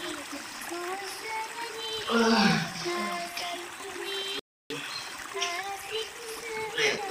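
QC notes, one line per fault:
4.39–4.70 s, rebuffering stall: playback drops to silence for about 0.31 s and then picks up at exactly the point where it stopped, with no material skipped or repeated. The player exhausted its downloaded audio and halted until more data arrived, so the gap is pure added time rather than a loss. The clean resumption with no jump in the sound is what separates this from a dropout or a packet-loss concealment glitch.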